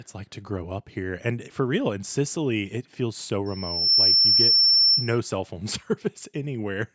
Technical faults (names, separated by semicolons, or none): loudspeaker feedback squeal